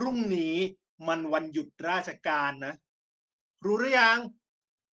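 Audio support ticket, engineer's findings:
No faults found.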